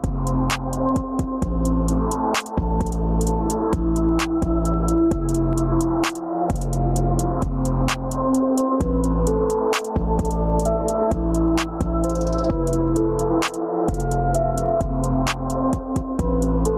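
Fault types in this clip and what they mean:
Gain pumping: the gain is pulled down on each loud sound, a swing of about 10 dB heard across the whole clip, leaving everything squashed. The likely cause is gain set far too high, with a fast limiter clamping down on peaks.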